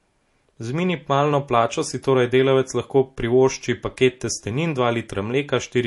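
From start to finish the speech has no content above 11.3 kHz and carries plainly audible watery, swirling artefacts. Sibilants turn metallic and chirpy, and onsets sound smeared. The likely cause is MP3 compression at a low bitrate, around 48 kbps to judge by the damage: short of bits, the encoder cuts the treble at a fixed point and drops weak frequency lines that flicker in and out between frames. A plain low-pass filter would dull the top end without that shifting, bubbly texture.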